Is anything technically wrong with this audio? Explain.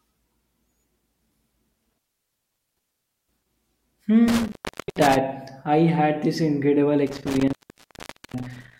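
Yes. The speech has an intermittent contact fault three times: from 1.73 to 3.49 s with the signal open for about 1.3 s, from 4.28 to 5.17 s (open about 0.49 s) just before "I had this incredible", and from 7.07 to 8.79 s (open about 0.81 s) just after it. A loose plug or cable breaks the circuit, so the sound drops out with crackle at each edge and faint hiss in between. On a waveform these show as near-flat gaps bounded by sharp spikes. A spectrogram shows vertical broadband streaks at each edge around a dark band.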